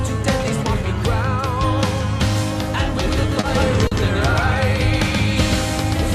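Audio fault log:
3.03 s to end: doubled audio track. A full-band copy enters abruptly, roughly 150 ms behind and about 5 dB quieter, with no decay or room colour. It is likely a slower second capture path or an edit holding two copies out of step.
3.40–3.46 s and 3.87–3.94 s: short stall from a late packet. Each time, a late packet emptied the jitter buffer, and the last sound was stretched by 30 ms, then 40 ms, before resuming in place. Nothing is lost, but sound is held too long.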